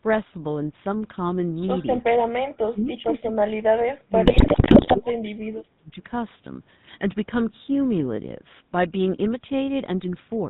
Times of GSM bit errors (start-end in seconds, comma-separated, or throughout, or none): 4.26-4.96